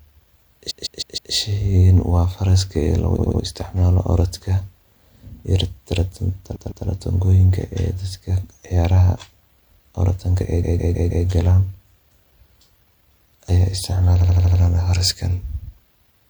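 Repeated frames stutter the speech at 0.70–1.32 s (a 157 ms block played four extra times), 3.18–3.41 s right after "waa faraska loogu" (78 ms, three extra), 6.55–6.86 s (157 ms, two extra), 10.62–11.25 s (157 ms, four extra) and 14.20–14.59 s (78 ms, five extra). In each case a short run of compressed frames was decoded again, which fits a block of about six or three codec frames. The clip is lengthened by the repeated time. On a spectrogram each event appears as identical, evenly spaced copies of one pattern.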